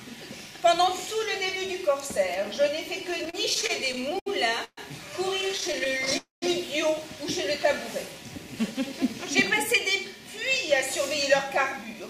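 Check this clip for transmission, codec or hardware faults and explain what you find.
Yes, there are network-related faults: two stretches of repeated stalls, two short call audio freezes, and two passages of jitter buffer speed-up.

From 3.11 to 4.28 s the audio stutters and drags, catching fifteen times as it repeats its last moment before moving on. The longest hold is 70 ms, and the holds add up to 250 ms, about a fifth of that span. From 5.41 to 6.13 s it happens twelve more times, but the catches are briefer, none longer than 12 ms, totalling 114 ms. These are repeated stalls (stutter). Packets kept arriving late or too slowly, so the jitter buffer kept running dry. The receiver stretched the last sound each time until more arrived, so nothing is lost and the audio is only delayed.

At 4.64 to 4.79 s the sound hangs for 131 ms, trailing off into about 50 ms of silence before resuming. 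At 6.17 to 6.44 s a longer hang of 249 ms fades into about 150 ms of silence. Both are call audio freezes. The likely cause is packets held up in transit until the jitter buffer emptied. The receiver extended the last sound and let it decay, then picked up exactly where it had stopped. That inserted a gap without dropping anything.

From 9.76 to 10.35 s the audio runs slightly fast, at 105% speed, and from 11.50 to 12.08 s faster still, at 108%. In both passages the pitch stays the same while the pace feels hurried. This is jitter buffer speed-up. After the earlier delays the buffer held more audio than its target, so the receiver trimmed many tiny pitch-period slices to catch up. It removed around 40 ms in the first passage and about 50 ms in the second.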